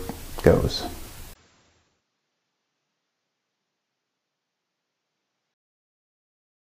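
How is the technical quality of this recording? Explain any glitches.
The recording has one clear glitch. An input switched to a poorer device runs from 1.33 s to 5.56 s. The sound turns dull and narrower, with nothing above 7.6 kHz, and the level falls by roughly 10 dB. A faint new noise floor sits well below the signal. A gap of about 20 ms marks the change. This is likely the system swapping to a lower-bandwidth microphone or headset profile and then switching back at 5.56 s, when the fuller sound returns.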